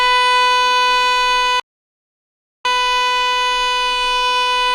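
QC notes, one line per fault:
1.60–2.65 s, playback stall: The sound cuts out mid-flow and the output sits silent for about 1.05 s. The player likely ran out of data or had its thread blocked. It then resumes and carries on from the gap.
2.65–4.74 s, time-compressed catch-up: After the dropout the audio runs hurried, at about 1.1 times normal speed, through to the end. Small pieces are cut out and cross-faded to clear the backlog. Pitch stays normal.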